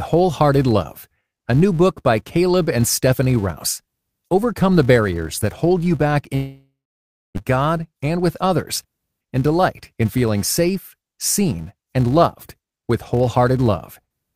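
From start to finish the speech carries a fault of a filter restarted on every block. The filter loses its memory at each block boundary and begins again from silence, so every block opens with a small transient. The result is a steady 200 Hz buzz, which fits blocks about 5 ms long, rising and falling with the speech level. On a spectrogram it appears as evenly spaced horizontal lines at 200 Hz and its multiples. The waveform shows tiny regular spikes at 5 ms intervals.

At 6.35 s the sound breaks off and does not return properly until 7.42 s, most likely because of a long network dropout. About a second of audio never arrived. The receiver covers the gap by stretching the last sound into a fading buzz or hiss, and silence follows for around 620 ms. When the speech resumes, the lost section is simply skipped. A spectrogram shows a smeared, decaying band followed by a blank gap. The waveform thins out and then goes flat before the signal comes back.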